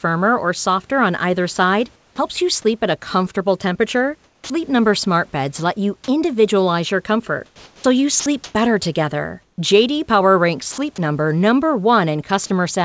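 From 1.96 to 2.18 s, just after "softer on either side", the sender's voice detector likely judged the pause to be silence and stopped transmitting, so the receiver filled the gap with comfort noise in place of the background. For 0.22 s the real room noise, about 36 dB below the loud speech, gives way to a smooth, featureless hiss roughly 5 dB quieter, so the pause sounds briefly emptied out.

At the end of that gap, from 2.15 to 2.18 s, the detector was likely slow to register that speech had resumed, leaving the onset clipped by the voice detector. The first 30 ms before "you sleep" never reached the receiver and were covered by comfort noise, so the phrase starts abruptly with no soft lead-in.

From 4.24 to 4.50 s, right after "a comfortable temperature", the detector likely mistook trailing low-level speech for background and shut transmission off. The result is sound dropped by the voice detector. 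About 120 ms of the word ending is lost within a 0.26 s stretch of synthetic noise.

Between 7.46 and 8.54 s the detector likely toggled on and off repeatedly, producing sound chopped by the voice detector. Over roughly half of that 1.08 s span, quiet syllables and word edges are replaced with comfort noise. The speech comes across as choppy.

From 9.42 to 9.58 s comfort noise likely stands in for the background again. This time it matches the level of the real noise, which sits about 46 dB below the loud speech, so the only change is a 0.16 s loss of texture.

Two shorter drops follow, at 10.72 to 10.78 s and 12.46 to 12.50 s. In each, the detector likely cut transmission during quiet speech, and 60 ms and then 40 ms of sound are replaced by noise. Both register as tiny gaps through the codec's band-limited sound, which carries nothing above 8 kHz.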